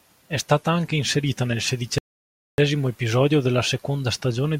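At 1.98 s, right after "stata anche inserita nel", the speech halts in a rebuffering stall: the player used up the audio it had downloaded and waited for more before continuing. The silence lasts until 2.58 s, adding about 0.6 s to the running time. What separates this from a dropout or packet loss is that no speech goes missing. When sound returns, it picks up at exactly the point where it broke off.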